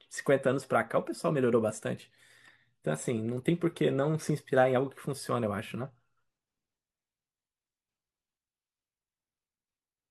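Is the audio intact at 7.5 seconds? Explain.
Yes, the speech at 7.5 seconds is intact, with no dropout, click, distortion or other fault to be heard at that moment.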